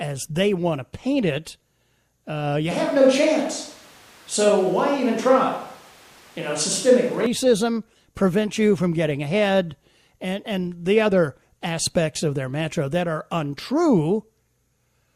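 At 2.71 s, right after "uh you", the speech turns suddenly roomy and hollow with thinner bass, and snaps back at 7.26 s. That's likely a switch to a distant microphone. The level stays about the same, with room noise around 30 dB below the speech.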